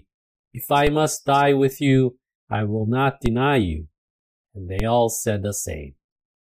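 Three DC steps land in the sound, at 0.87, 3.26 and 4.80 seconds. At each one the waveform's zero line suddenly jumps by about -10 dBFS, and you hear it as a short low thump, even though the sound itself carries on untouched. The offset doesn't hang around: it bleeds away the way a 20 Hz high-pass would drain it. That points to an input with an offset being switched in, or a converter recalibrating.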